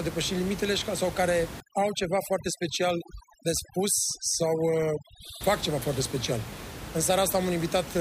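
From 1.60 s to 5.41 s, overdone noise removal sets in: an aggressive noise reducer pulls individual frequency bands down or out wherever they resemble its noise estimate. The room noise, about 12 dB below speech, drops and breaks up into twinkling specks, and quiet parts of the speech go with it.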